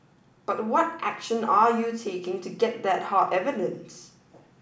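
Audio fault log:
Nothing stood out on listening to this speech recording.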